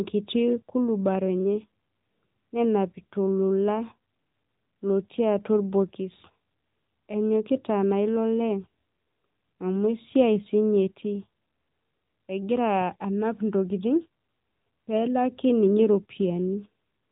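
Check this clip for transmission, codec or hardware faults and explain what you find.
One fault runs through the whole speech clip: AMR narrowband mobile codec coding. Nothing passes above about 3.8 kHz, so the speech has the boxed-in, telephone quality of a band-limited channel, which points to 8 kHz sampling. The codec models the vocal tract and drives it with a handful of pulses per subframe instead of sending the waveform itself. That approximation is plainly audible as a buzzy, synthetic edge on the voice, consistent with a mid-rate AMR-NB mode around 10 kbps.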